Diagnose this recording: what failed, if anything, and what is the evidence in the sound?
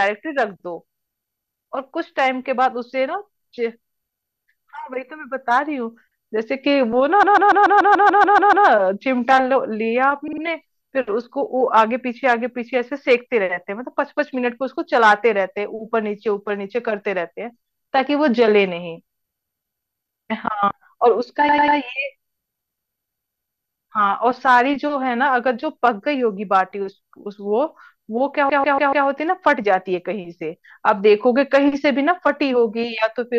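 Repeated frames, a codec or storage fault, occur at 7.23–8.67 s, 10.27–10.42 s, 21.48–21.77 s and 28.49–29.07 s. Each is a stutter: the same short slice of speech (144 ms, 48 ms, 96 ms and 144 ms) replays 10, 3, 3 and 4 extra times. A run of compressed frames was written or delivered more than once, so the decoder plays it again, lengthening the audio by about 2.4 s in total.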